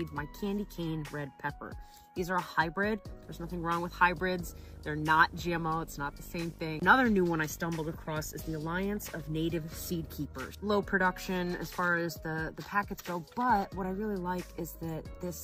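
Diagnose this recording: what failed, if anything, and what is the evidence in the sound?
The analogue wiring failed, letting video or display buzz into the audio from 3.23 s to 10.25 s. A coarse 50 Hz buzz with hash above it sits roughly 15 dB below the sound, and a thin 15.6 kHz line tone rides alongside. A nearby screen or video cable is coupling its field and line scanning into the audio path.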